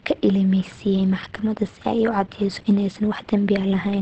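From start to finish the speech sounds muffled and hoarse, with plainly audible damage. On a spectrogram the energy stops at a hard ceiling near 8.3 kHz, with nothing above it for the whole clip. The likely cause is Opus compression in its speech-oriented SILK mode at wideband, where a low bitrate, which fits roughly 16 kbps, forces the encoder to drop upper frequencies and model the voice coarsely.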